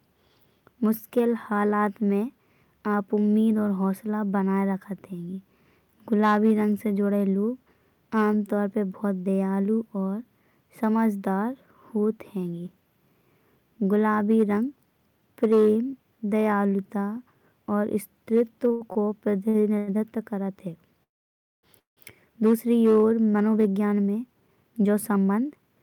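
Speech, with three kinds of network-playout fault late in the clip. From 18.67 to 19.89 s there are repeated stalls (stutter): six short breaks, the longest 92 ms, together about 0.3 s or a quarter of that span. Packets kept arriving late, the jitter buffer kept running dry, and the receiver stretched the last sound each time, so nothing is lost but the speech drags in jerks. On a spectrogram this shows as brief smeared, held bands between normal syllables. Two call audio freezes follow, at 21.03 to 21.65 s and 21.79 to 21.99 s. In each, the sound hangs on a fading buzz or hiss and then drops to silence, about 0.58 s in the first and 0.14 s in the second. The likely cause is packets held up in transit and the buffer emptying, with playback resuming exactly where it stopped once they arrived. A waveform shows a short decaying tail and then two flat, empty stretches, and a spectrogram shows near-blank columns. 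From 23.26 to 25.77 s comes a jitter buffer speed-up. After the backlog, the receiver trimmed many tiny pitch-period slices to cut its excess delay, roughly 0.3 s in total. Speech runs at 112% speed with unchanged pitch and sounds hurried. Harmonic spacing on the spectrogram stays the same while syllables sit closer together.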